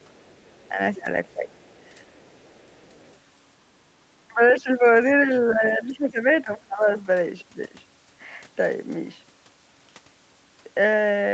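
From 0.0 to 0.65 s, and again from 1.56 to 3.17 s, a very faint second voice sits far beneath the main speech. This is likely the other side's voice leaking through: the loudspeaker's sound reached the microphone, and the echo canceller left a trace of it behind.

The speech also dips in short bursts at 0.69 to 0.79 s, 0.95 to 1.07 s and 1.33 to 1.55 s, then over longer stretches at 4.29 to 4.85 s, 5.24 to 6.26 s and 6.44 to 6.87 s. The first dip is slight and the rest are deep. This is likely speech suppressed in double talk: with both sides talking at once, the canceller could not tell the talker from the echo and turned both down.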